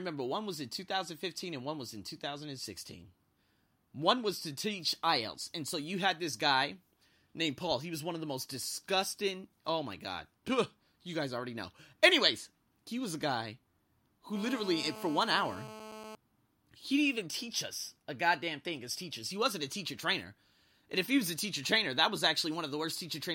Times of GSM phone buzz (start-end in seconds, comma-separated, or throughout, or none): 14.35-16.15